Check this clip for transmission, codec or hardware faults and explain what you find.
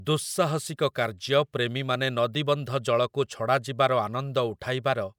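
Nothing stood out on listening to this speech recording.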